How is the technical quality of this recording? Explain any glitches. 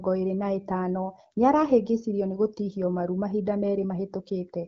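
No glitches or faults here.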